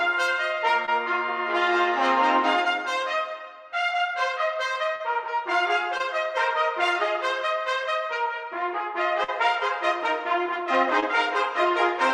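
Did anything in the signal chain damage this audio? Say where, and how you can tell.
Yes. Short concealed packet loss at 0.85–0.89 s, 4.95–5.02 s, 5.98–6.01 s and 11.00–11.04 s is network damage. About 20 ms goes missing each time, 40 ms at 5 s. The receiver bridges each hole by extending the preceding sound, heard as a brief smear or wobble.

A burst of packet loss at 9.23–9.30 s is also network damage: about 40 ms of consecutive audio is lost or arrives too late to play. The concealment stretches the last sound across roughly 45 ms while fading it down, then playback resumes further on with that stretch gone.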